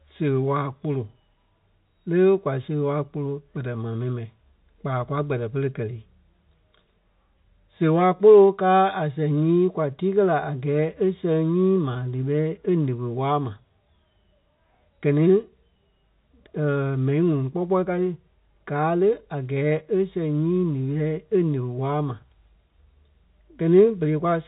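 No technical faults can be heard in this speech; it carries the narrow band of G.711 telephone coding, with nothing above about 3.8 kHz, and only faint coding noise that tracks the level of the signal.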